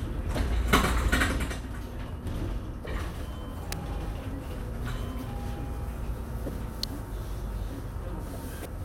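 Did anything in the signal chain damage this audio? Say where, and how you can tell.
Yes. Damaged data in a compressed stream shows up at the codec stage as four brief disturbances, each about 34 ms, at 0.34, 2.82, 6.46 and 8.62 s. Corrupted bytes there make the decoder misread frames and lose sync until it finds the next valid frame header.

Two electrical switching spikes sit on top of the sound at 3.72 and 6.83 s as sharp, very short snaps of a few milliseconds. They most likely came from a nearby switch or discharge arcing into the analogue wiring, not from the digital path.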